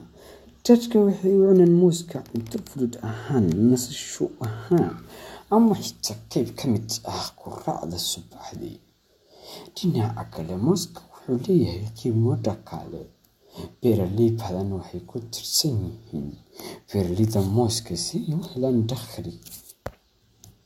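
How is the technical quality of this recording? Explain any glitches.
No technical faults can be heard in this speech recording. There are no glitches to explain.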